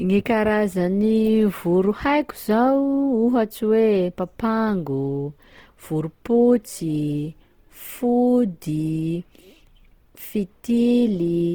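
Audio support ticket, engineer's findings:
Opus compression, whole clip, speech. Plainly audible grainy, rough texture on voiced sounds with noisy, hissy upper bands. Bandwidth held to full range, content reaching about 20.2 kHz. Likely cause: Opus encoder in CELT music mode at a low rate, fitting about 16 kbps. The encoder preserves per-band energy but fills starved bands with folded or noise content rather than leaving gaps, so there is roughness instead of swirl.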